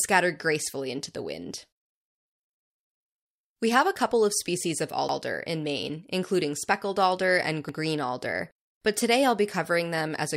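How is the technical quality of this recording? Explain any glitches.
The recording has one recurring fault: overlapping chunks. It appears twice, from 5.09 to 5.19 s and from 7.69 to 7.79 s. The speech was handled in chunks about 2.5 s long. Each new chunk began before the previous one had finished. So 100 ms of audio plays twice at the join. You hear a brief stutter at each join.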